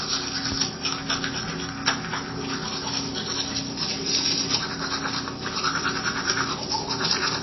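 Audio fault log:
Throughout, MP3 compression: treble stops at 5.8 kHz and detail swirls watery between frames, unlike a plain low-pass; likely a starved encode near 24 kbps.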